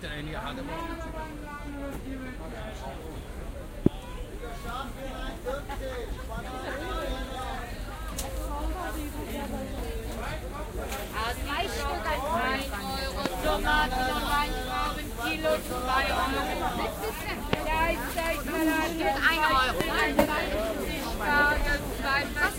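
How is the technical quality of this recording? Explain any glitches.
The recording is marred by four loud pops, at 3.86, 13.26, 17.53 and 19.81 s. Each is a single short pop lasting about 22 ms. The likely cause is a sudden step or pulse of voltage entering the signal chain, from a plug, a switch, static or a driver glitch. Each jump lands on top of the sound, which carries on underneath, as a sharp pop or thump roughly 20 to 25 dB above its surroundings.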